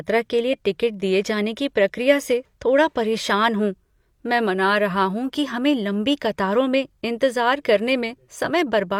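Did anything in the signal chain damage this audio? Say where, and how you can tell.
No, nothing in the chain damaged it.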